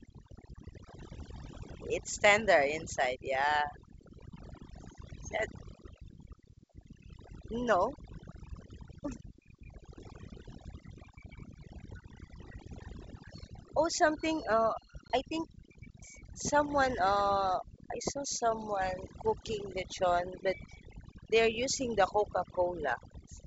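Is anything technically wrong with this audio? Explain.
Yes. Overdone noise removal runs throughout: the reducer cuts bands near its noise estimate too hard, leaving a dropped background that breaks up into twinkling specks. Packet loss on an ADPCM call hits at 15.08 s, a 20 ms hard-edged hole, roughly one packet. The decoder's predictor and step size lose sync, so the audio resumes slightly distorted just before "I think".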